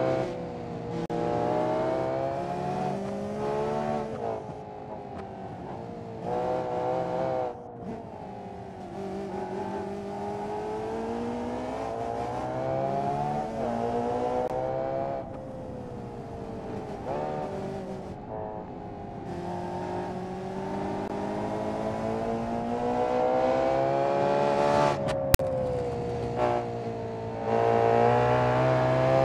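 File tags played as audio appear from 25.34 to 25.39 s, a burst of about 50 ms. A block of metadata holding text, followed by zero padding, has been decoded as though it were sample data. The text bytes produce a loud, harsh rasp pushed off-centre to one side by their skewed byte values, and the padding collapses into a short stretch of dead silence. The whole event arrives and stops with abrupt, hard edges, cutting into the surrounding audio.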